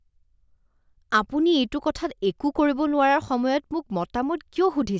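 No technical faults are audible.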